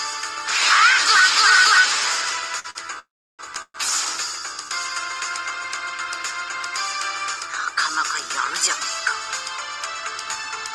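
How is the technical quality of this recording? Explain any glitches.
The recording has clear network-delivery glitches: two brief stalls, two longer freezes close together, and a hurried stretch near the end.

Short stalls from a late packet, at 2.59–2.66 s and 2.70–2.77 s: each time a packet was due but hadn't arrived, the jitter buffer ran dry, and the receiver stretched the last sound for about 48 ms and then 49 ms until the data turned up. Playback then resumed where it left off, so nothing is lost, but the sound is held too long, with a buzz or dip, and everything after is pushed later.

Call audio freezes, at 2.99–3.41 s and 3.62–3.76 s: the likely cause is packets held up in transit, leaving the jitter buffer empty for longer. The receiver carried the last sound forward as a fading buzz or hiss that falls to silence, for about 330 ms in the first freeze and 60 ms in the second. 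Once packets arrive, the audio continues from where it stopped. This inserts gaps of 397 ms and 122 ms, and no content is skipped.

Jitter buffer speed-up, 9.77–10.72 s: after the earlier delays, the buffer held more audio than its target. To pull the lag back down, the receiver cut out many short slices of one or a few pitch periods in quick succession, removing roughly a tenth of a second. The audio runs at about 110% speed with unchanged pitch, which sounds hurried.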